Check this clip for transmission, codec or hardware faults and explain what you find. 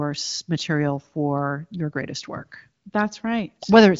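No faults found in this clip.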